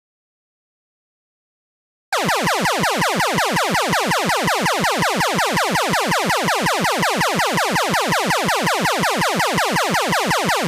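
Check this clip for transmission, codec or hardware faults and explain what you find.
One fault is present: an audio dropout to silence. It runs from the start to 2.13 s. The input was likely lost through a disconnected device or a mute while zeros were recorded. The opening is silence, with no room tone, before the sound cuts in.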